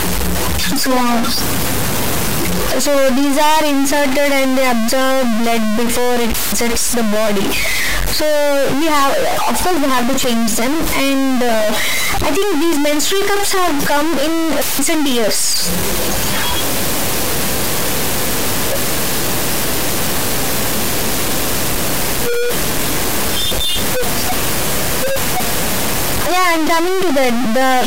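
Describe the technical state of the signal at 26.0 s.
At 26.0 s the speech carries harsh, buzzy distortion that runs through the whole clip, with loud noise filling the pauses. The likely cause is a stuck bit: one high-order bit held fixed, offsetting about half the samples by a large step of around -10 dBFS.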